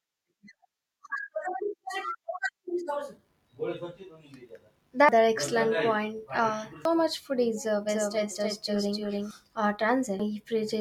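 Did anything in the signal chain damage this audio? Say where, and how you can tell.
Yes. At the codec or storage stage, damaged data in the compressed stream produces short glitches at 5.09, 6.85 and 10.2 s. Corrupted frames are misread or rejected, so the decoder loses sync and resumes at the next frame header.

From 7.89 to 9.31 s there is a doubled audio track: a full-band copy trails by about 300 ms at roughly the original's level, with no decay or room colour, and switches on and off abruptly. It is likely a second, slower capture path mixed back in.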